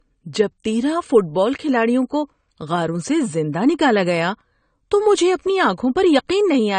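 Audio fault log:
Throughout: low-bitrate audio saved at a high bitrate. The speech stops abruptly at 9 kHz, leaving a flat empty band above it on a spectrogram, with the first encoding's artefacts still present below. This likely comes from a low-bitrate AAC encode that the later high-rate MP3 cannot restore.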